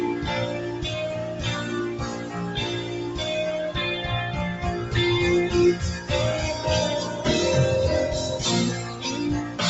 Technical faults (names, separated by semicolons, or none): noise suppressor applied to music or sounds; sound cut by the noise suppressor